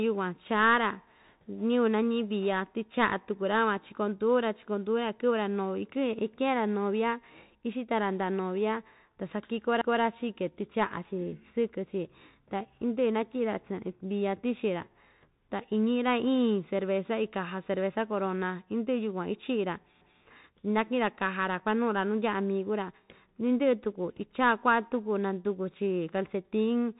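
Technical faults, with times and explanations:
Throughout, Bluetooth CVSD headset codec: nothing above 3.8 kHz survives, loud bright sounds outrun the adaptive step and go scratchy, with granular hiss underneath.
9.81–10.01 s and 20.01–20.21 s, overlapping chunks: every 10 s a 200 ms stretch plays twice where chunks overlap, giving a stuttery repeat at each join.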